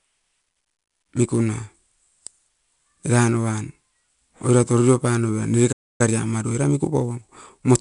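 Across the whole speech clip, 4-bit ADPCM compression is at work. Each sample is coded as a coarse 4-bit step from a predicted value, with the step size adapting as the signal changes. The resulting error rides along with the level, so louder passages carry a gritty hiss and sharp onsets distort where the step can't keep up. Nothing sounds above about 11 kHz, which fits a sample rate near 22 kHz and a bitrate around 88 kbps, and the damage is plainly audible.

At 5.72 s a playback stall cuts the sound off mid-flow. The output drops to silence until 6.01 s, a gap of about 0.27 s. The likely cause is the player running short of data, or its playback thread being held up, so nothing reached the output until it recovered. The break is abrupt and clearly noticeable, a hole in the middle of ongoing speech rather than a natural pause.

From 6.01 s to 7.67 s the player performs a time-compressed catch-up to work off the backlog left by the stall. 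Small slices of audio are cut out and the remaining pieces cross-faded together, making playback run at about 1.15 times normal speed while the pitch stays the same. The speech sounds hurried over these final seconds.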